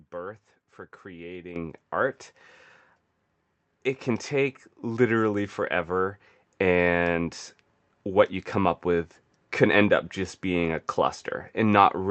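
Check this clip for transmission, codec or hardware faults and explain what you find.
One fault stands out: the microphone volume is stepped up once, at 1.56 s, while the speech is passing through a call link whose band stops near 8 kHz, which fits an Opus stream at around 48 kbps.

At 1.56 s the level jumps by about 10 dB. The call software judged the input too quiet and raised the device's microphone volume in a single step, so the voice and the background noise get louder together. That separates it from a talker simply raising their voice, where only the speech rises, and from a gradual automatic gain ramp. Here the noise floor lifts at the same instant in one abrupt step.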